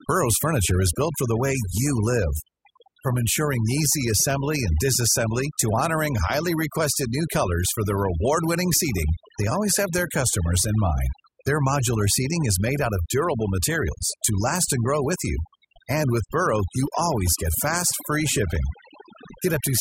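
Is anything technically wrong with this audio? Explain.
Yes. Throughout the speech there is overdone noise removal. A noise reduction stage was set too aggressively, so any frequency band whose level sat close to its estimate of the background noise was pulled far down or gated off entirely, and the quieter parts of the speech fell below that threshold as well. The background drops and breaks up into twinkling, warbling specks.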